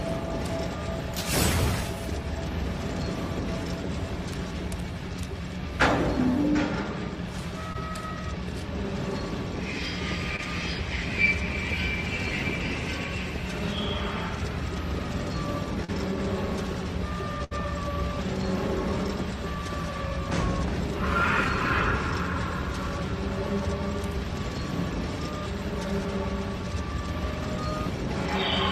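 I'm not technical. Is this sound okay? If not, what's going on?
No. Short concealed packet loss at 7.73, 10.36 and 15.84 s: tiny bits of audio arrived too late, so the player briefly stretched the preceding sound, leaving small smears or wobbles. A burst of packet loss at 17.44 to 17.53 s: several pieces went missing together, so the last sound was held and faded before the audio jumped ahead.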